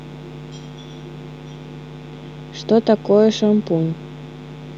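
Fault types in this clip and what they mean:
Mains buzz: a steady, raspy buzz runs under the speech for the whole clip, sitting well below it but never stopping. It is tied to the 60 Hz mains, with sharp switching spikes twice in every cycle from something like a dimmer, rectifier or unshielded lead piling up harmonics into the kilohertz range. That spread of upper harmonics separates it from plain mains hum, which would be a smooth, low tone near 60 Hz with little energy above.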